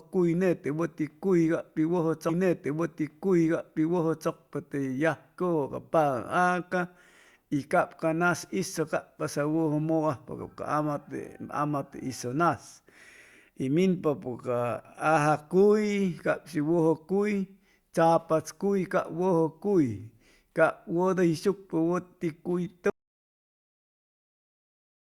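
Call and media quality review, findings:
Stream segment repeated, 2.29 to 4.29 s: a full 2 s of speech plays a second time, with a small blip at the jump back. Player fetched or queued the same segment twice. Identical content, unlike an echo or jitter-buffer stutter.

Audio dropout to silence, 22.90 s through end: speech cuts off mid-flow into silence, with no room tone or noise floor, unlike noise suppression or gating. Likely a lost input or stray mute while the encoder kept writing silence.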